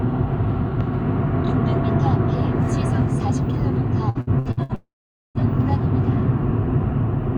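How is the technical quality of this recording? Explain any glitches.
The recording has two back-to-back transmission faults in its second half.

Repeated packet loss (robotic sound), 4.09 to 4.72 s: five gaps up to 66 ms were patched by extending prior audio, concealing about half the span. The result is choppy.

Long network dropout, 4.75 to 5.38 s: the audio buzzes or hisses briefly as it fades, then goes silent for about 0.47 s. The likely cause is roughly 0.6 s of undelivered audio, which never returns.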